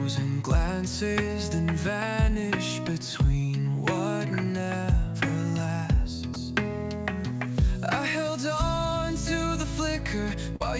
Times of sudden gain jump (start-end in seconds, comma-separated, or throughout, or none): none